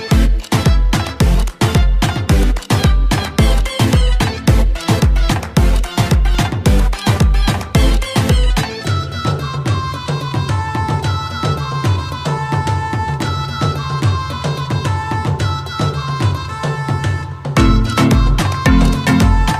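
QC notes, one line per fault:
1.42 s and 6.35 s: repeated buffer. Each time, a block of roughly 2.7 ms, which fits a 128-sample buffer, plays twice because fresh audio arrived late. The two hard joins are so close together that they are heard as a brief click rather than a stutter.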